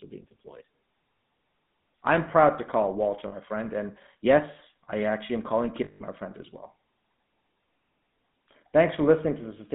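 Throughout, the speech carries the GSM full-rate codec sound. The coder models the vocal tract and feeds it a sparse, regularly spaced pulse excitation, so voiced sound comes out buzzy and gravelly rather than just dull. The damage is plainly audible. The band runs from about 150 Hz to 3.7 kHz, which fits a 13 kbit/s full-rate coder. Unlike simple telephone band-limiting, the roughness sits inside the voice itself, not only in the missing highs.

At 3.28 s and again from 5.84 to 6.02 s there are lost GSM frames. The decoder fills each gap by repeating the last good frame's settings, so the sound holds as a rough, metallic ring instead of dropping out. The first loss lasts 40 ms, consistent with two 20 ms frames, and is brief. The second lasts 160 ms, eight frames. A plain packet dropout would cut to silence or click; here the last sound is frozen.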